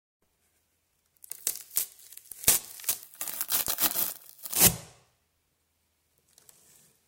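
From 3.03 s to 4.56 s there is a section at the wrong speed. The audio in this stretch runs about 1.73 times faster than normal. Pitch rises with it, by roughly ten semitones. Everything sounds higher and hurried, then snaps back at 4.56 s. The change starts and stops abruptly. This is likely a playback or editing step running that segment against the wrong clock, so speed and pitch shifted together.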